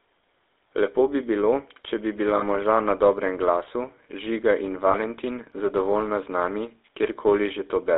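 The speech has been through the GSM full-rate codec for its whole length. It sounds buzzy and gravelly, with the damage plainly audible. The band runs only from about 300 Hz to 3.7 kHz. The harsh texture fits the 13 kbps full-rate coder, which drives a vocal-tract model with sparse pulses. Lost GSM frames cause two brief rough, metallic rings. The first runs from 2.38 to 2.43 s, right after "bilo če bi bila", and lasts 40 ms, which fits two lost frames. The second runs from 4.92 to 4.98 s, lasting 20 ms, which fits one frame. Each time, the decoder held the last good frame's settings.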